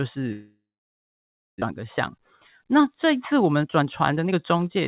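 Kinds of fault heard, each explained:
Long network dropout: From 0.32 s to about 1.64 s the sound stops arriving, most likely because the network connection dropped. The receiver briefly stretches the last sound into a fading buzz, then leaves nearly a second of silence, and roughly 0.78 s of material never returns. On a spectrogram, the band-limited energy, which stops at 4 kHz as expected on this call path, smears into a decaying blur, then goes blank. The waveform flattens to near zero.
Jitter buffer speed-up: After the gap, the buffer holds more audio than it aims for. From 1.71 s to 4.77 s the receiver trims tiny pitch-period slices again and again, playing the speech at about 111% speed with unchanged pitch. Roughly 0.4 s is cut, so it sounds hurried. The waveform shows small splice points where cycles were removed. Harmonics on the spectrogram stay level but syllables are closer together.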